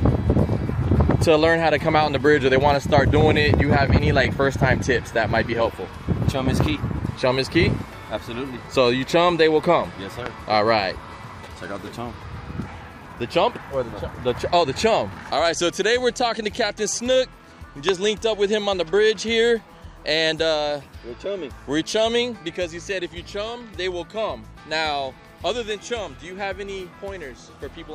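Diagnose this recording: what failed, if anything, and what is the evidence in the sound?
Loud pops, likely from the analogue wiring stage (a plug, switch or static discharge), at 3.54–3.56 s, 6.61–6.68 s (a double), 10.26–10.28 s and 17.89–17.91 s, peaking about 15 to 20 dB above the signal. Unlike dropouts, the sound continues uninterrupted beneath each voltage pulse.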